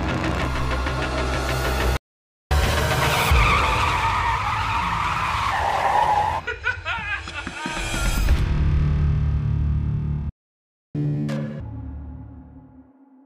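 A playback stall at 1.97 s silences the audio for about 0.54 s, most likely because the player ran out of buffered data or its thread was blocked. Catch-up at higher speed follows from 2.51 to 5.51 s. The player resamples its backlog at 1.15 times normal speed, raising pitch by roughly two semitones until it settles back. A second playback stall at 10.29 s cuts out the sound for about 0.65 s, likely from the same starved buffer. It is followed by a much harsher catch-up from 10.95 to 11.60 s at double speed, with the pitch jumping by roughly ten semitones.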